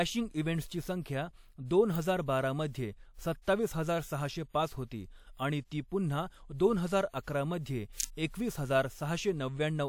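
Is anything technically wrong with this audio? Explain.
Yes, an electrical switching spike occurs at 1.95 s and again from 8.00 to 8.04 s, between "दोन हजार अकरा मध्ये" and "एकवीस हजार". Each is a sharp snap laid over the speech, likely from a nearby switch arc coupling into the line. Nothing drops out, which distinguishes it from a dropout.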